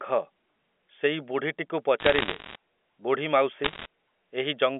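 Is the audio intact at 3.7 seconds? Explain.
No. From 3.64 to 3.86 s the sound carries bit errors on a digital phone line: on this G.711 telephone channel, roughly one bit in fifty is flipped, and each flip corrupts a single sample. Flips landing on the sign or upper bits jump that sample far off, giving sharp isolated ticks that pile into crackle. Unlike packet loss, nothing drops out or goes silent. The speech continues unchanged underneath, with the clicks sitting on top.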